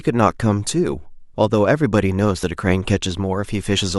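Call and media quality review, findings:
Overlap between stream segments at 2.43 s. Packaging/player: adjacent segment timestamps overlap, so the player trims about 5 ms of audio that was never duplicated. Result: speech waveform jumps, heard as a single click or tiny skip at the segment boundary.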